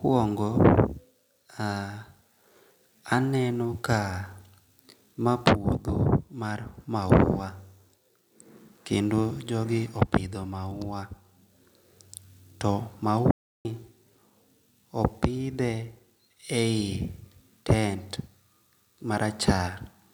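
At 13.31 s the speech cuts out dead, an audio dropout to silence lasting about 0.34 s until 13.65 s. Even the room tone vanishes, so the input was likely lost briefly while the recorder kept writing silence, and whatever came in that gap is gone.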